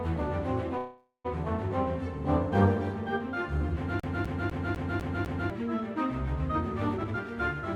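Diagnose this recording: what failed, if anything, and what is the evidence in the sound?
At 0.77 s the music stops moving forward and the last sound carries on as a fading buzz. It decays to silence for its final 130 ms or so, and the music picks up again at 1.27 s. This is a call audio freeze at the network and jitter-buffer stage. The likely cause is packets held up in transit so the buffer ran dry. The receiver filled about 471 ms, and nothing was lost. The music resumes where it stopped, now about 471 ms later than before.

From 4.00 s to 5.50 s the same 0.25 s fragment plays over and over, six times, with a brief mute at each jump. The repetition is fast and perfectly even. This is a CD stuck on one turn, a fault at the storage and playback stage. A scratch knocks the laser back one track at the same point on every revolution. That replays one turn's worth of audio and produces the classic skipping-disc stutter.

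Between 6.94 s and 7.27 s the music rushes ahead at about 155% of normal speed while the pitch stays put. The tempo loses its steadiness there. This is a jitter buffer speed-up in the buffer stage of the call path. The buffer was holding more audio than its target. To cut the delay, the receiver cut out many short pitch-period pieces in quick succession, roughly 0.2 s in total.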